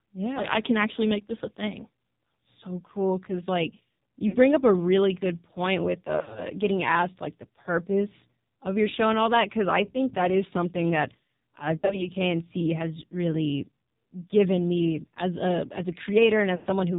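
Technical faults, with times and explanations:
Throughout: AMR narrowband mobile codec. The speech is squeezed into a 4 kHz band with nothing above it, and heavy coding damage makes the voice buzzy and synthetic. That fits AMR-NB at a low rate near 5.9 kbps, where a few pulses per subframe drive a vocal-tract model.
4.28 to 4.37 s: lost AMR speech frames. After "cool cuz like" the sound briefly dips and warbles for about 40 ms before "up a really good", as the decoder reuses the last good pitch and tract settings at falling gain.
6.16 to 6.41 s: lost AMR speech frames. After "really good point with", losses totalling about 140 ms are scattered over 200 ms, the longest gap 60 ms, so the sound dips and warbles before recovering roughly on "getting asked like the".
11.78 to 12.11 s: lost AMR speech frames. After "is something that uh", about 80 ms of concealed frames spread over 200 ms, with runs up to 40 ms, give short warbling dips where the decoder extrapolates and fades.
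16.56 to 16.67 s: lost AMR speech frames. A continuous 100 ms run near the end is drawn out from the last good frame and fades toward silence as the concealment gain drops.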